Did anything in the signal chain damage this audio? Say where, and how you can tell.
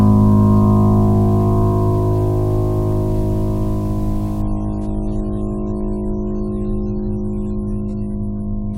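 Yes. Network stage: from 4.42 s to the end, an adaptive stream at a lower bitrate cuts treble above 11.2 kHz abruptly, without a gap, which fits a drop from 96 to 32 kbit/s.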